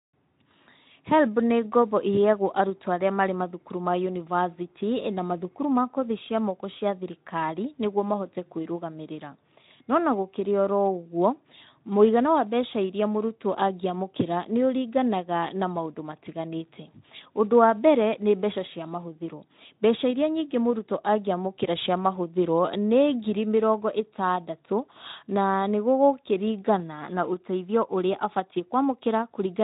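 No faults are audible anywhere in this speech.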